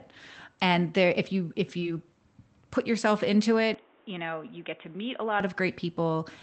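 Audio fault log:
1.79–1.83 s, short concealed packet loss: Right after "there if you if", about 20 ms of audio arrived too late, and roughly 17 ms was patched by extending the preceding sound before blending back. Unlike a clean dropout or click, this is a brief smear with no true gap.
3.74–5.40 s, input switched to a poorer device: After "put yourself into", the sound abruptly turns dull, with nothing above 3.8 kHz. It also drops about 5 dB, and a new noise floor sits roughly 30 dB down. There is no silence at the change. This points to a likely switch to a narrower-band microphone or headset profile, since codec band-limiting would not start mid-clip like this.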